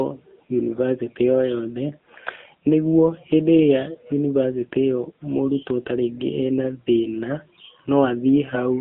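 From start to finish the speech carries AMR narrowband mobile codec damage, at a rate that sounds like 7.4 kbps. Everything above about 3.6 kHz and below 200 Hz is gone, so the voice sits in a thin phone band. What separates this from a plain telephone band-pass filter is the plainly audible buzzy, synthetic quality: the voice is rebuilt from a vocal-tract model excited by sparse pulses, not simply trimmed.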